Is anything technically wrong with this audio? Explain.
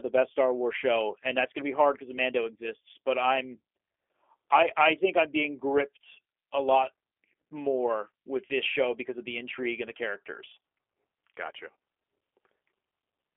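Yes. For the full length of this speech clip the signal has gone through a G.729 codec. Instead of sending the waveform, the codec models each short frame as a vocal tract filter driven by a pitch predictor and a few pulses, which fits an 8 kbit/s VoIP link. The audio is confined to a telephone band of roughly 300 Hz to 3.4 kHz, with nothing above 3.6 kHz, and the modelled excitation gives the voice a plainly audible rough, synthetic edge.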